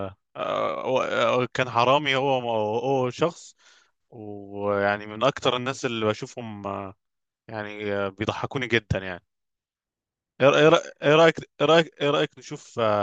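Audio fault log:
No fault in this speech clip.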